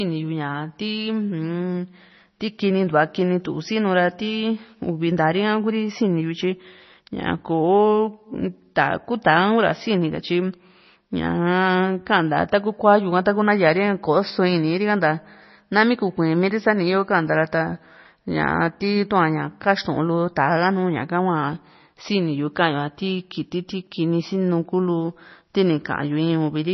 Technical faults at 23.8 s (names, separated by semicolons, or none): MP3 compression